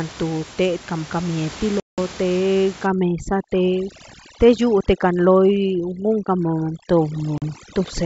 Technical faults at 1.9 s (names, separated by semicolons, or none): packet loss on an ADPCM call